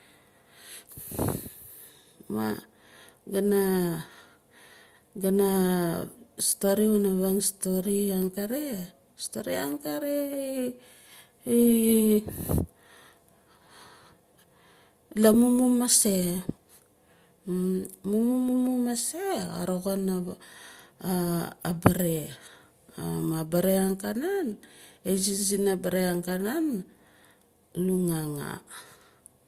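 No technical faults are audible.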